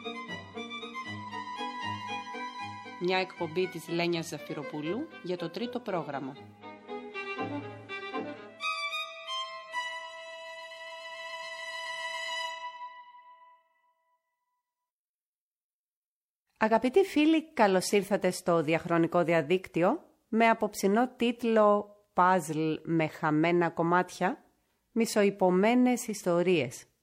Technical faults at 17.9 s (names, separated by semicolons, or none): none